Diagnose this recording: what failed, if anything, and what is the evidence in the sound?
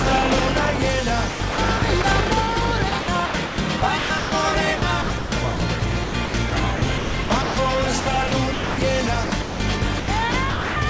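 Call processing: the sound turns choppy at 1.30–2.04, 2.90–4.32, 4.78–7.56, 8.00–8.78, 9.24–9.60 and 10.00–10.76 s. Quiet edges give way to flat hiss, likely sound chopped by the voice detector gating transmission and inserting comfort noise. A spectrogram shows abrupt, featureless noise blocks, and the waveform shows sudden low, even plateaus.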